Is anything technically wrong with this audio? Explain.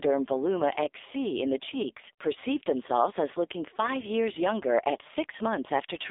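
Yes. AMR narrowband mobile codec, throughout: a pulse-driven vocal-tract model at a rate consistent with about 5.9 kbps leaves a buzzy, synthetic voice confined to 300 Hz–3.7 kHz, nothing above 3.8 kHz.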